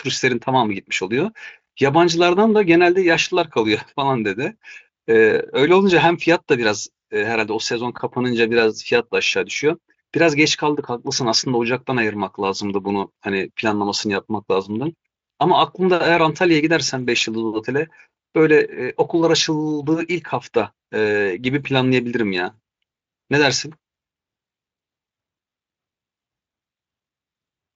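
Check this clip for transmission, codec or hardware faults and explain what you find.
No faults turn up in the speech, which has gone through the Speex codec at what sounds like a high-quality setting, with content reaching up to 7.7 kHz and nothing above that.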